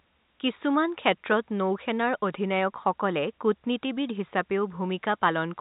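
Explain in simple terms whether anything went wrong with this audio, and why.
Nothing went wrong: the speech has the narrow sound of ordinary landline telephone coding, with only faint room noise far beneath it, and no fault can be heard anywhere in it.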